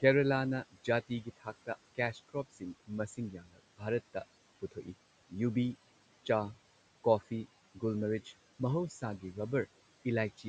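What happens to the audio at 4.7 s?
From 4.62 to 4.88 s the noise suppressor cuts speech, mistaking it for background and pulling it down by up to about 12 dB for roughly a tenth of a second. The sound fades but never drops to silence.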